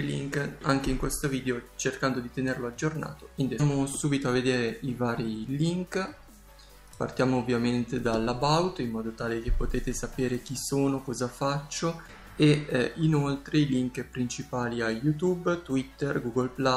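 At 3.59 to 3.61 s there is a skip ahead. About a second and a half of audio was dropped while later audio was already waiting. Playback jumps forward with no gap filled. The two sides are joined almost directly, so the sound lurches abruptly.

From 3.69 to 6.29 s a jitter buffer speed-up follows. The buffer held more audio than its target. The receiver trimmed many short pitch-period pieces, roughly a fifth of a second in total. The audio runs at 108 percent speed, same pitch, sounding hurried.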